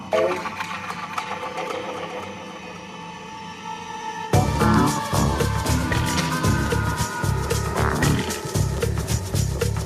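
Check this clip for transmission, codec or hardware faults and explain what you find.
I find no faults to explain in this clip.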